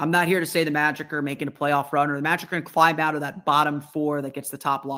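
Clock drift between sender and receiver affects the whole clip. The sender's audio clock runs roughly 1.5 percent slower than the receiver's, so samples arrive a little too slowly for playback and the jitter buffer keeps edging toward empty. The receiver must keep padding the stream to avoid running dry. As a result, the timing of the speech never quite settles and carries small, unevenly spaced hiccups from start to finish.

Repeated timing corrections run from 0.10 s to the end of the clip. They are how the receiver copes with that slow sender: it repeatedly duplicates short fragments of audio, always lengthening the sound and never shortening it, so playback runs at 98 percent speed. Together these insertions add roughly a tenth of a second to the speech. Each repeat is tiny, and if heard at all, the effect is a faintly dragging, slightly uneven tempo with occasional stutter-like catches.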